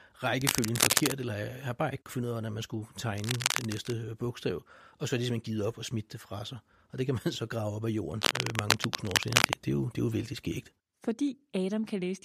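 Cable scratch noise occurs at 0.41–1.12 s, 3.16–3.97 s after "af hvordan man skulle", and 8.12–9.60 s before "det er jo". Each burst is dense, uneven scratching about as loud as the speech or louder, likely from a worn connector or cable being moved.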